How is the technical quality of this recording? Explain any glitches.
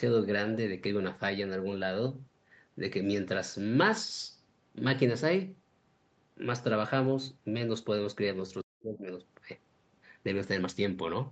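The recording has one clear glitch. The speech is band-limited, with nothing above 8 kHz, as a call path encoding to about 40 kbps would give. From 8.61 to 9.11 s the speech sinks by roughly 40 dB for half a second, likely speech suppressed in double talk as the echo canceller ducked both talkers.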